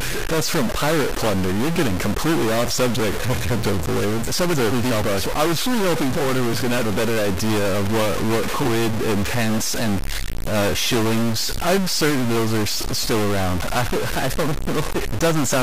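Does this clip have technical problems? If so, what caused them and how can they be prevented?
Yes. A stuck bit causes harsh, buzzy distortion across the speech and fills the pauses with steady noise. The likely cause is one data bit held fixed by a faulty line or converter, shifting about half the samples by a step of about -20 dBFS. On a waveform, the pauses show square-edged jumps instead of a flat line. On a spectrogram, broadband haze covers those gaps. Checking converter wiring and running a bit-pattern test before recording would prevent it.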